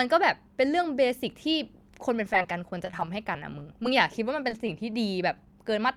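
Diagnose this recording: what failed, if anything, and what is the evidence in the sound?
Between 2.33 and 3.85 s the speech turns choppy, with small pieces missing. This is repeated packet loss (robotic sound) at the network stage: 17 gaps, none longer than 19 ms, were patched by extending the preceding sound. The patches fill about 11% of that stretch.

Later, brief smears or wobbles occur at 4.49, 4.91, 5.34 to 5.37 and 5.51 s. Each is short concealed packet loss on the network path: roughly 10 ms of audio arrived too late, and the decoder extrapolated the preceding sound before blending back into the real signal.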